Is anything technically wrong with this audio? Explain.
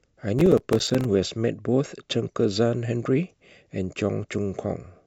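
Yes. From 0.39 to 1.05 s there is processor overload crackle. The processor repeatedly missed its buffer deadlines, leaving brief hard-edged silent gaps, which fits buffers of around 5 ms. Many misses in a row produce a gritty crackle riding on the speech.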